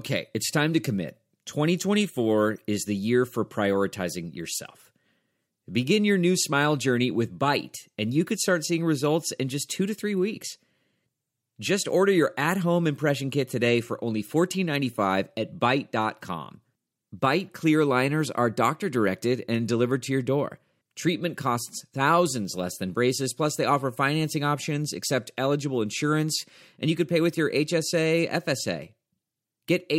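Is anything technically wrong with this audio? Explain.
No, nothing is technically wrong with this audio.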